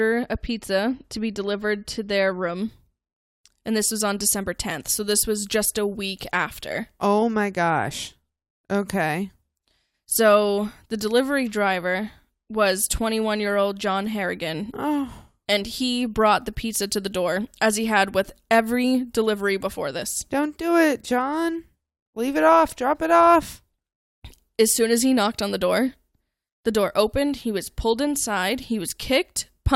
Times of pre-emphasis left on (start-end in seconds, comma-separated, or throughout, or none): 2.56-29.75